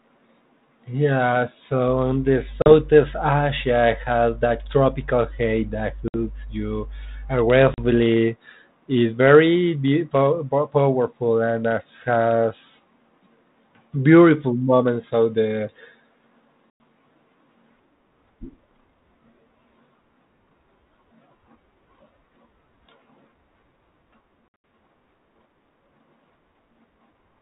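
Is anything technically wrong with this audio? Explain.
Yes, there's packet loss on an ADPCM call: sharp silent gaps at 2.62 s (40 ms), 6.08 s (60 ms), 7.74 s (40 ms), 16.7 s (100 ms) and 24.48 s, where about 140 ms drops out in bits over 160 ms, the longest run being 80 ms. Each hole knocks the decoder's adaptive predictor and step size out of sync with the sender's, so the speech comes back slightly distorted before settling. The underlying band-limited G.726-style coding, which fits 32 kbit/s, adds only light grit.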